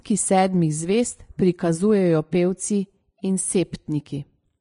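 The whole speech clip has plainly audible damage, likely from Vorbis compression at a low rate, around 31 kbps; nothing above 10.6 kHz, and the treble turns hissy and grainy.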